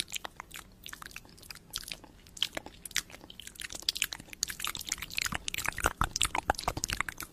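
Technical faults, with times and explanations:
No technical faults can be heard anywhere in it.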